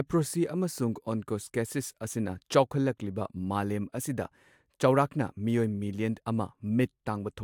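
No technical faults can be heard anywhere in this speech recording. There is nothing here that needs a time or an explanation.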